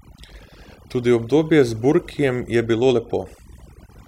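A short speech recording with overdone noise removal running the whole way through. The noise reduction was pushed too hard, so it kills any frequency band sitting near its noise estimate, and the softer parts of the voice get swept out along with the noise. You can hear it in the gaps, where the background drops away and breaks up into little twinkling specks.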